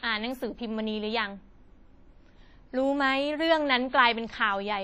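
Throughout the speech the sound rings and turns washy, with a hiss that swells and fades alongside it and nothing above 15.4 kHz. This is likely WMA compression, heavy damage that fits a low bitrate near 32 kbps smearing quantisation noise across long transform blocks.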